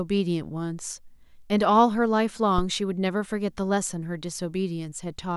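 At 2.58 to 2.70 s a phantom power thump hits: supply switching on the live input sends a low thud, peaking about -13 dBFS, decaying within 26 ms.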